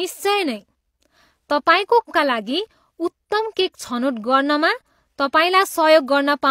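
At about 2.05 to 2.10 s the speech breaks into a brief glitch, roughly 50 ms long. That's damaged data in the compressed stream: the data there was corrupted, so the decoder garbled those frames and lost sync until it found the next valid frame header.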